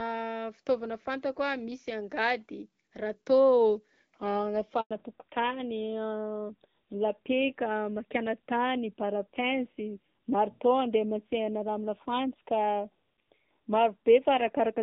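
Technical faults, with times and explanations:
4.81–4.91 s, handover gap: the speech dies away within a few tens of milliseconds and then there is 100 ms of dead silence before sound resumes. The call was passed from one network to another, and no speech frames arrived while the link was re-established. The silence is clean and empty, with no repeated or smeared fragments, which sets it apart from ordinary packet loss with concealment. The bandwidth change that starts right as it ends also marks it as a handover.
4.91 s to the end, fallback to narrowband: from this point nothing above 4 kHz remains. Before the gap the speech was HD Voice with light coding damage and content reaching toward 7 kHz. Afterwards it is duller and rougher, which fits a switch from AMR-WB at 12.65 kbit/s to AMR-NB at around 7.4 kbit/s. A simple low-pass filter would not add this coarse codec texture. Low-rate wideband coding would still reach past 6 kHz, whereas this change is a hard 4 kHz ceiling that starts exactly at the handover and lasts to the end.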